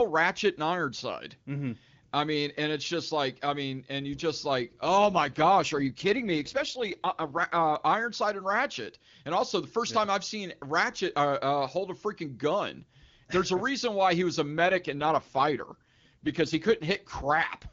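Just after "and you just like" (4.98 to 7.76 s) and after "why he was a" (14.58 to 17.64 s), an AMR rate drop roughens the wideband speech into a raspy, synthetic tone. This fits a fall from 23.85 to 8.85 kbit/s. On a spectrogram the bandwidth holds with no gap, but the harmonics blur.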